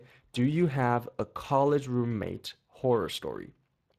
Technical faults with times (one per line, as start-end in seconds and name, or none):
0.00-3.99 Speex codec